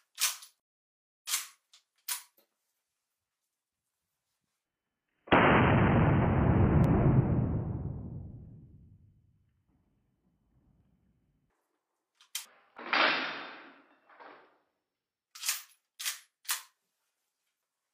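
At 6.84–6.88 s, 10.81 s and 12.77–12.81 s, overlap between stream segments with 2-second boundaries drops up to 38 ms, causing tiny skips, each a waveform discontinuity and thin vertical spectrogram line.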